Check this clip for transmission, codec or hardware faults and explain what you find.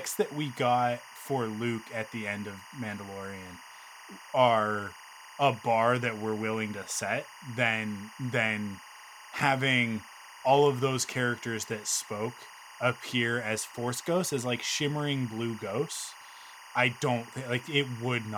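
The speech carries one fault throughout: timecode bleed. Linear timecode from an adjacent track or cable has coupled into the audio path. The code is a square wave that flips between two frequencies, near 1 kHz and 2 kHz, depending on the bit values in each frame, and its rhythm here is consistent with 24 fps code. It sits roughly 20 dB below the speech and is heard as a continuous chirping, warbling buzz behind it for the whole clip.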